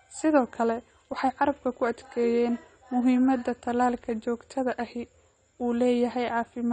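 Throughout, AAC compression dulls the speech: a spectrogram shows nothing above 9 kHz, likely from AAC-LC coding at a low bitrate near 32 kbps, leaving sibilants fizzy.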